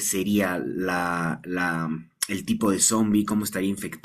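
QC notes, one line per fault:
2.23 s, hard clipping: a single brief overload, driven about 5 dB past what the stage could pass, squares off the speech peaks and produces a short crackle. The waveform shows flat-topped peaks, and the spectrogram shows a thin vertical smear of high harmonics.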